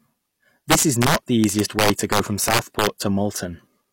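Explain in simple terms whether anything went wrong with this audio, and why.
Integer overflow: the loudest peaks went past the largest number the system could store and flipped to the opposite sign, causing cracks throughout the speech.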